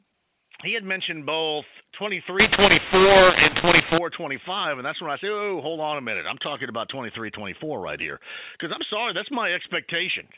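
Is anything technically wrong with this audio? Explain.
Yes. From 2.40 to 3.98 s, just after "he had mentioned both", the speech turns harsh and gritty, with some levels coming out too large and others too small, while the gaps between syllables fill with a hiss that wasn't there before. This is mu-law and A-law mixed up: the telephone audio was coded with A-law G.711 but decoded as mu-law, so each 8-bit code maps to the wrong level, scrambling loudness and lifting near-silent samples well above the floor.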